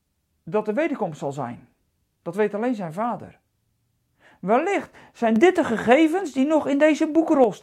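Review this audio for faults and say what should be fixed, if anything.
A sudden gain jump hits the speech at 5.36 s. The level steps up by about 6 dB at once and stays there until 7.44 s. Speech and background noise rise together. That points to a digital gain change, likely applied instantly without a ramp. To prevent it, smooth every gain change with a short fade of a few milliseconds.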